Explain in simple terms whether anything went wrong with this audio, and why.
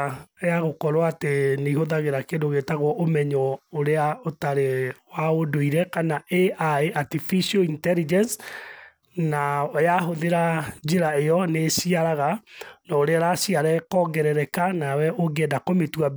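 Nothing went wrong with this audio that a listener would notice.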